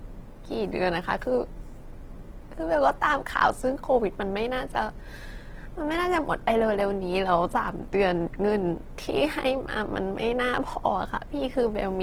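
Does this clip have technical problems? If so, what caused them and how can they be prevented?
Yes: Opus compression throughout leaves the speech plainly grainy and rough, with starved bands refilled by noise, likely from a low bitrate near 16 kbps. A spectrogram shows smeared noise-like texture up to about 20 kHz. Prevent it by encoding at a higher bitrate.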